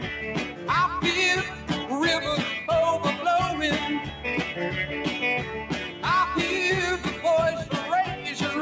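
Throughout the audio, a noise suppressor applied to music or sounds swings the level by around 10 dB: a speech-tuned suppressor treats sustained tones and decays as noise, so attacks pass while held material sinks. Unlike compressor pumping, the loss follows steadiness, not loudness. Sound cut by the noise suppressor is clearest at 0.50–0.66 s (about 6 dB), 1.51–1.70 s (about 5 dB), 4.08–4.24 s (about 5 dB) and 5.88–6.03 s (about 6 dB), where steady portions dip briefly rather than dropping out to silence. The call microphone processing limits the band to 8 kHz.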